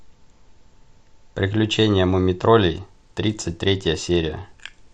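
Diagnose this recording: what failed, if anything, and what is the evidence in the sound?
The failure is in the codec stage, on the Bluetooth leg. From about 2.61 s to the end at 4.94 s the speech loses its top end and picks up a gritty, grainy noise floor. That's a Bluetooth SBC bit pool drop: the link got congested and the sender cut the bit pool, so the highest sub-bands got few or no bits and the rest were quantised coarsely. The sound points to a fall from around 28 to 11, roughly 90 kbps, and it never recovers before the clip ends.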